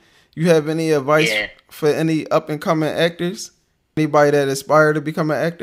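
Damaged data in a compressed stream shows up at 3.97 s in this speech clip, right after "up and coming actors". Corrupted bytes in the encoded stream make the decoder misread or reject frames there and lose sync until it finds the next valid frame header.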